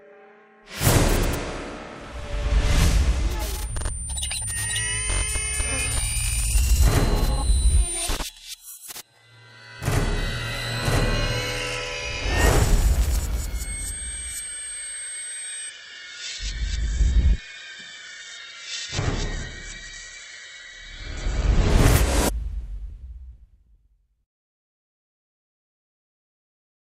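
From 15.70 to 21.70 s the adaptive stream switches to a lower bitrate after a slowed connection. Nothing survives above 8.1 kHz, and the sound turns dull and smeared, consistent with Opus dropping from 64 to 12 kbit/s. Unlike packet loss, the quality changes abruptly with no gap.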